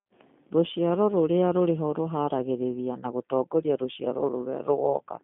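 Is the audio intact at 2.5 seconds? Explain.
No. At 2.5 seconds, as across the whole clip, the speech sounds rough and synthetic, confined to a narrow telephone band of about 150 Hz to 3.6 kHz with nothing above 3.7 kHz. This is G.729 codec damage. The codec rebuilds each short frame from a vocal-tract model and a few pulses, which fits a low 8 kbit/s stream.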